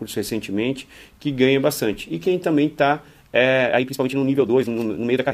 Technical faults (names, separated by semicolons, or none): time-stretched section